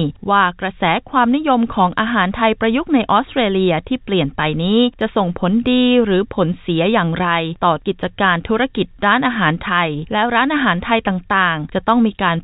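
No technical faults can be heard in this audio. It came through a call path with nothing above 4 kHz, a narrowband ceiling that fits a telephone-grade codec such as G.711 mu-law at 64 kbps.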